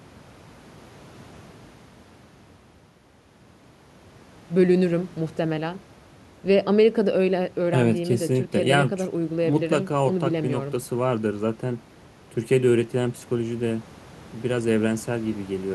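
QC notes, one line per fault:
No technical faults are audible anywhere in the recording; the signal stays continuous and stable throughout.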